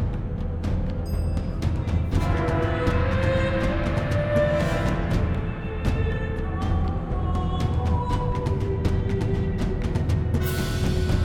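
No technical faults can be heard anywhere in the audio, and the signal stays steady and intact throughout.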